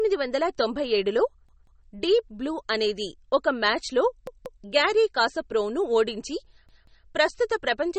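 A short speech recording with two problems. Throughout, the top end is gone above about 8.4 kHz and there's a watery, swirly quality with smeared consonant attacks, likely from MP3 compression at a low bitrate, something around 32 kbps. At that rate the encoder lops off the treble and lets weak frequency lines flicker on and off between frames, which is what makes it sound underwater. Then there are three stutters from a repeated buffer, where fresh audio didn't arrive in time and the same chunk got replayed. Each time a piece of about 186 ms plays two extra times with hard joins, which fits an 8192-sample buffer. The first runs from 1.49 to 1.86 s, right after "వందల తొంభై ఏడులో" and before "డీప్ బ్లూ అనేది". The second is 4.27 to 4.64 s, just before "గ్యారీ కాస్పరోవ్ను ఓడించి". The third is 6.69 to 7.06 s, following "మ్యాచ్లో గ్యారీ కాస్పరోవ్ను ఓడించి". The repeats add time rather than replacing anything, so no audio is actually lost at those points.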